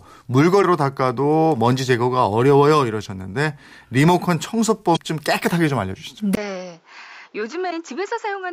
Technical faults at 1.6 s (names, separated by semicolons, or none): none